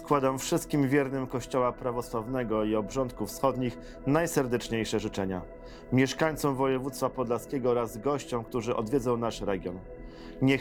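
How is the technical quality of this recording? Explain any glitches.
No glitches or technical faults are audible anywhere.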